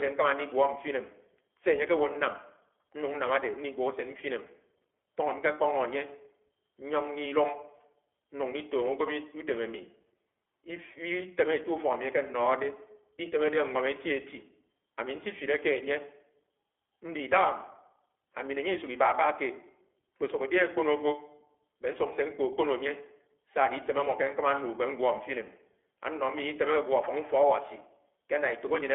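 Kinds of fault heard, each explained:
iLBC codec: a narrowband VoIP codec that codes each frame's excitation independently. The speech has a plainly audible rough, slightly synthetic edge, consistent with 20 ms frames at 15.2 kbps. A spectrogram shows energy mainly between 300 Hz and 3.4 kHz, with nothing above 3.7 kHz.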